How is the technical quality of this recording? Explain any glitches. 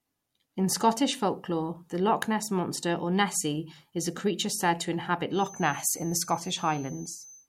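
The recording has one clear fault, a feedback whistle that starts at 5.29 s and runs to the end of the speech clip at 7.48 s. A thin, steady tone near 6.2 kHz sits around 20 dB below the speech, swelling and fading slowly in level. The likely cause is a loudspeaker-to-microphone loop held just at the edge of feedback, sustaining one frequency without building up. Unlike a fixed electrical whine, it wavers in level and does not sit at a mains-related frequency.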